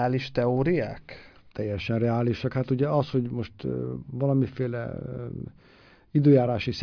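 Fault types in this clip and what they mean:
Nothing stood out on listening; the speech came across without any audible problem.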